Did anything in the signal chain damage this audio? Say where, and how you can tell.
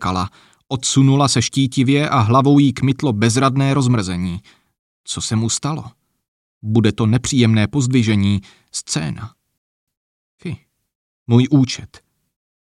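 Yes, at the playback stage. From 9.58 s to 9.88 s the sound cuts out abruptly in mid-flow, leaving a silent gap of about 295 ms before the output resumes. That is a playback stall. The gap is clean dead air rather than a burst of noise or a smeared repeat, which points to the player going quiet when its buffer ran dry or its audio thread was likely blocked by other work.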